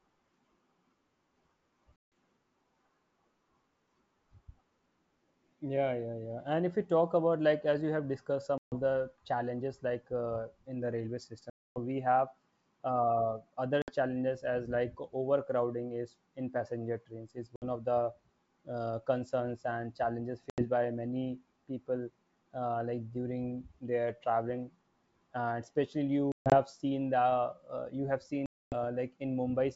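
Packet loss on an ADPCM call punches hard-edged silent gaps of 60 to 260 ms at 1.96, 8.58, 11.50, 13.82, 17.56, 20.50, 26.32 and 28.46 s. After each gap the decoder's predictor has lost step with the sender's, so the speech resumes slightly distorted before settling.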